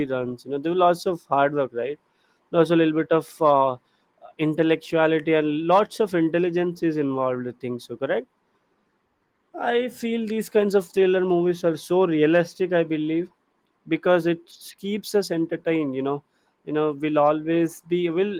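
No technical faults are audible in this speech.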